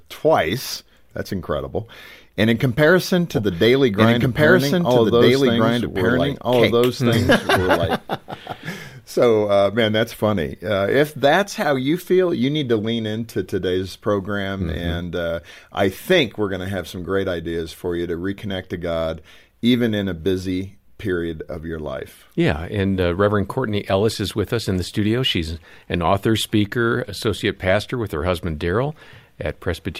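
It's a speech clip, and right after "in comparison" at 3.33 s you get a doubled audio track running until 7.95 s: a second, full-band copy of the same audio trailing about a second and a half behind, at roughly the same level as the original. It's dry, with no tail or room colour, and it cuts in and out abruptly. Most likely an edit left two copies of the audio out of step.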